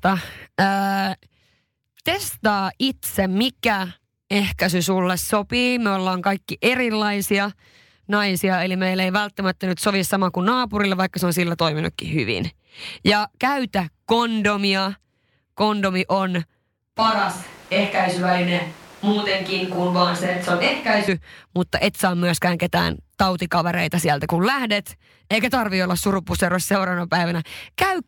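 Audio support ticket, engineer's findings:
Speech turns roomy and hollow, thinner in the bass, 16.97 to 21.08 s. Abrupt change in and abrupt return. Level roughly unchanged. Room noise rises to roughly 25 dB below the speech. Likely a switch to a distant microphone: close mic dropped, far pickup substituted, so more reflections and less proximity bass.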